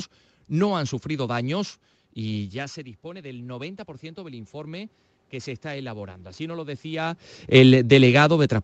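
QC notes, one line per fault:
2.34–7.26 s, automatic gain rising: after "no han sufrido daños" the input dropped about 15 dB, so gain crept up about 11 dB, swelling voice and room noise together.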